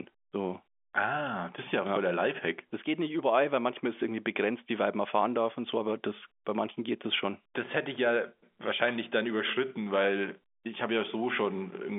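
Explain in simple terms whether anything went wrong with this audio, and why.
Nothing went wrong with this audio: its narrow, phone-like sound comes from ordinary G.711 telephone coding, which is working as it should.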